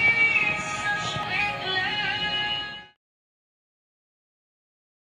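Brief glitches at 1.23 s and 2.96 s, the second landing just as the fade-out that begins around 2.5 s ends, come from damaged data in a compressed stream: corrupted bytes make the decoder misread frames and lose sync.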